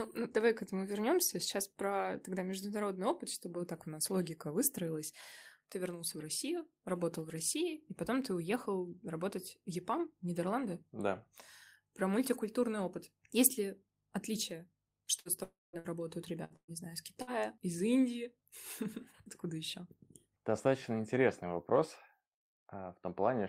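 Burst of packet loss at 15.19–15.28 s, just after "ли отличие": about 60 ms of speech was lost, and the receiver filled the gap by continuing the last sound and fading it, so it comes through as a brief fading continuation before the speech resumes further on.

Long network dropout, likely, at 15.43–15.76 s: about 300 ms of speech went missing. The concealed sound decays and then leaves roughly 190 ms of silence before the audio returns.

Further bursts of packet loss follow at 15.79–15.87 s, 16.44–16.53 s and 16.56–16.71 s, the last just before "знаю из", then another at 17.22–17.42 s just after it. Each drops about 60 ms, except 16.56 s, which loses about 120 ms and ends in a short silence. Every one of these gaps is heard as a fading, smeared continuation of the preceding sound.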